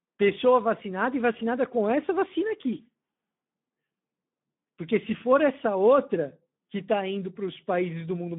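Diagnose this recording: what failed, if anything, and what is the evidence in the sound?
Codec stage: Speex coding throughout leaves speech hoarse and noisy. The spectrogram is blank above 3.8 kHz with fuzzy harmonics, fitting low-bitrate CELP, near 11 kbit/s.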